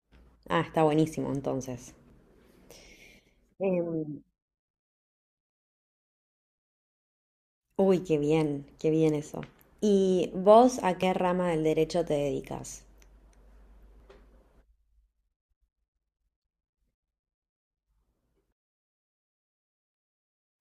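At 2.10, 8.05, 11.03 and 14.00 s the speech skips forward, with around 30 ms of sound gone each time and the two sides butted together without any silence. The spacing in multiples of about three seconds points to audio missing between chunks, likely from a recorder dropping a sliver while closing one three-second block and opening the next. On a waveform each skip shows as an abrupt splice, and on a spectrogram as a sharp vertical seam where harmonics jump.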